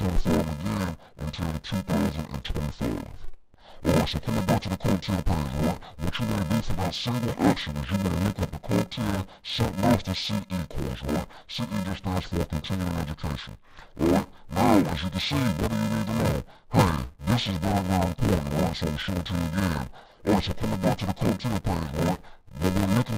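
From start to finish the sound is dull and robotic, with a steady buzz at 375 Hz and no clear drop of an octave. This is interleaved audio read as planar. Each 2.67 ms block holds alternating left and right samples, but the first half is taken as left and the second half as right. The halves play side by side at half speed, so the overall pace holds. The block length fits a 128-sample block, which is too short for any octave shift to be heard.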